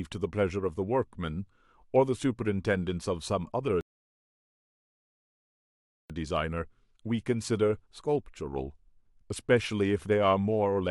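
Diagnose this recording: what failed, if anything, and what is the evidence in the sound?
The playback stage failed with a rebuffering stall. At 3.81 s the speech drops to silence and resumes at 6.10 s from exactly the point where it stopped. The player drained its buffer and waited for data, so nothing was lost but about 2.29 s was added.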